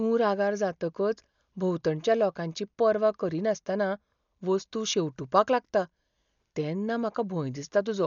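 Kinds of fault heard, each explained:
Dolby Digital compression: the speech sounds dull and heavily damaged, with nothing above about 6.9 kHz and a rough, fluttery noise hanging around voiced tones. That's likely a low-rate AC-3 style encode, maybe near 48 kbps, where empty frequency lines get dither noise instead of real detail.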